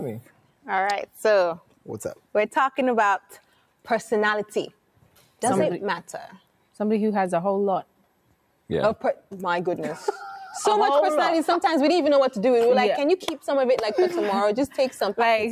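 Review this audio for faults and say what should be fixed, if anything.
The noise suppressor is cutting sound at 0.22–0.65, 1.6–1.88, 3.21–3.87, 4.72–5.41, 6.38–6.77 and 7.86–8.45 s. Each time it pulls things down by about 12 dB for a few hundred milliseconds, so steady and fading parts sink and tails get clipped short. Backing off the suppression strength or raising its threshold should fix it.

There's a single sharp click at 5.72 s, most likely dropped samples. A tiny fraction of a millisecond goes missing, so the waveform jumps to a later value and leaves a thin vertical line in the spectrum. Giving the capture or transfer buffer more headroom should stop it.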